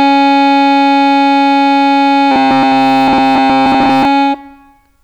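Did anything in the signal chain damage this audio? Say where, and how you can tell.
Yes: from 2.32 to 4.05 s the music turns into a rigid metallic buzz at 134 Hz, robotic sound from repeated short buffers, likely a starved playback buffer looping about 7.5 ms chunks.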